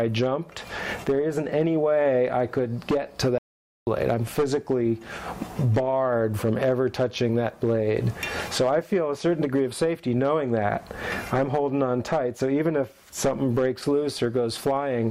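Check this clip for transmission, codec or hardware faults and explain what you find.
There's one fault here, a playback stall. From 3.38 s to 3.87 s the sound cuts out mid-flow for roughly half a second, then comes back. The likely cause is the player running short of data or having its thread blocked, leaving the output silent until it recovered.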